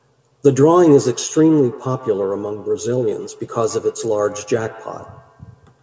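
From 0.85 s to the end of the clip, the speech picks up a thin, ringing repeat trailing each phrase by about 150 ms, sitting about 19 dB below the direct sound at its loudest. This is feedback echo between two devices: a second device in the same room on the call plays back what this microphone sent, and the microphone catches it again. Its echo canceller only removes what its own device plays, so the returning copy passes through.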